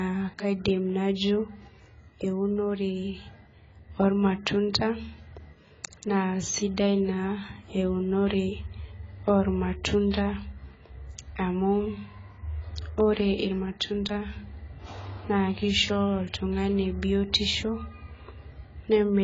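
From start to finish the speech sounds dull and smeared, with a watery, fizzy edge on sibilants, likely from heavy AAC compression at a very low bitrate, around 16 kbps. A spectrogram shows nothing above 7.7 kHz, a hard ceiling.

From 10.10 to 10.14 s, an attack arrives with a short hiss leading into it, which is pre-echo. The codec spread the noise meant for the loud onset across its whole block, and the quiet gap before it was filled. On a waveform, a noise smear runs about 32 ms ahead of the transient.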